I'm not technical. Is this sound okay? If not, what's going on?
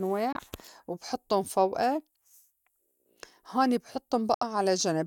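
No. The speech briefly cuts to silence at 0.33 to 0.36 s and 4.34 to 4.43 s, then carries on. This is likely a Bluetooth dropout, where the wireless link missed some sound.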